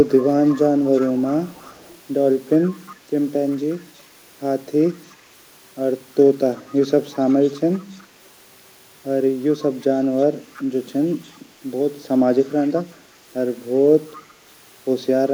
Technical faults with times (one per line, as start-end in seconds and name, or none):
0.08-2.96 echo leak
3.50-4.01 echo leak
4.84-5.15 echo leak
6.55-8.27 echo leak
9.53-10.63 echo leak
11.24-11.35 echo leak
12.49-12.70 echo leak
14.09-14.34 echo leak